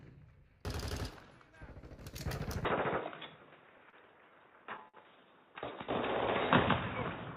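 At 2.65 s the input most likely switched to a poorer device, and that lasts through the end. The band narrows, so the sound turns dull and boxy with no gap or level jump, and a new noise floor sits roughly 30 dB below the signal. Then comes a short stall from a late packet, twice: at 3.90 s and at 4.88 s a packet arrived late and the jitter buffer ran dry. The last sound was stretched for 31 ms and then 56 ms before playback resumed, so nothing is lost, but each spot has a brief held, slightly buzzy smear.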